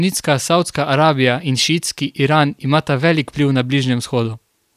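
Just speech here, and there's nothing technically amiss to flag anywhere along the way.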